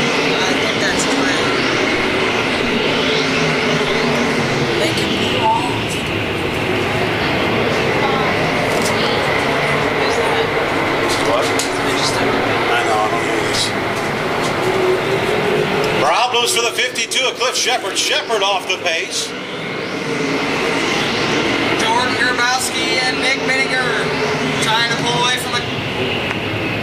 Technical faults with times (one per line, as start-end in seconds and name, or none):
none